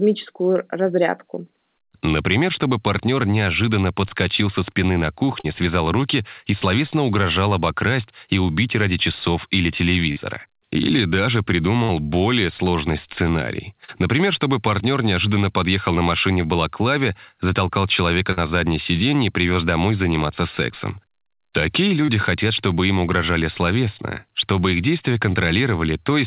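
At 5.4 s and 10.12 s, short concealed packet loss fills about 40 ms gaps with continued sound. Each gives a brief smear or wobble. At 11.84 s, a burst of packet loss replaces about 40 ms with a fading continuation. The speech resumes with that part missing. Short concealed losses recur at 13.85 s and 22.05 s. A second burst hits at 18.32 s. The call path, which fits G.711 A-law, has nothing above 4 kHz.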